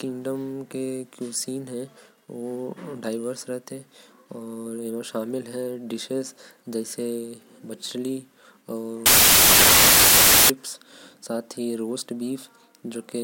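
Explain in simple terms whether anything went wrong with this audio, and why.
Something clearly breaks between about 9.06 and 10.50 seconds: the speech suddenly turns into a loud, harsh noise. That's samples built from the wrong bytes. Each sample is stored as a couple of bytes, and here the player glued them together wrongly, maybe off by one or in the reverse order. The tiny, jittery detail ends up as the loudest part of each value, so you get harsh noise instead of speech.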